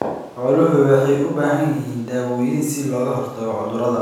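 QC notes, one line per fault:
No faults found.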